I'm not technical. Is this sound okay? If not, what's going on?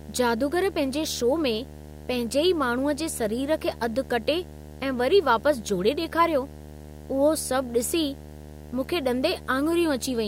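No. A steady buzz runs under the speech for the whole clip, with a fizzy hash sitting above it. This is video or display buzz: a screen or a video cable near the audio wiring leaks its picture refresh signal into the sound. Here the buzz repeats 75 times a second, matching a display refreshing at 75 Hz. It is quieter than the speech itself.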